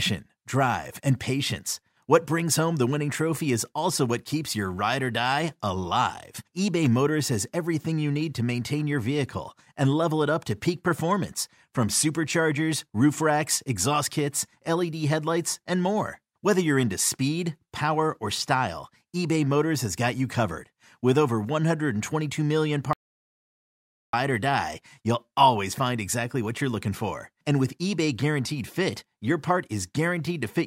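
Audio dropout to silence from 22.93 to 24.13 s in this speech recording: about 1.2 s goes to silence before "or die you'll always", likely a lost input.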